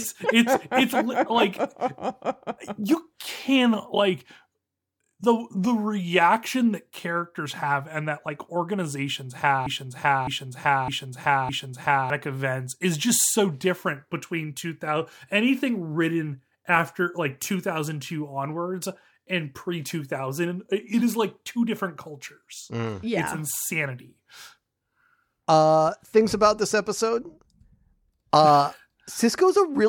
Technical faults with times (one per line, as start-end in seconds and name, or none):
9.66-12.10 broken-record loop